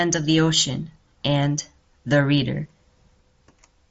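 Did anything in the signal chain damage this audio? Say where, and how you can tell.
No, nothing in the signal chain damaged this speech; the Bluetooth mSBC headset link carries it as expected, with the band ending near 7.7 kHz.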